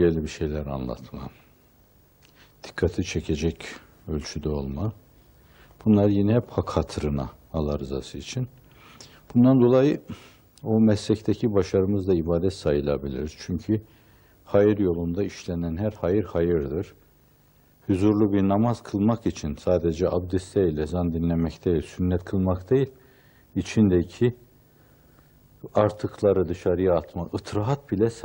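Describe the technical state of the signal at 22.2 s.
A short digital blip at 22.17 s is damaged data in the compressed stream: corrupted bytes make the decoder misread a frame and lose sync.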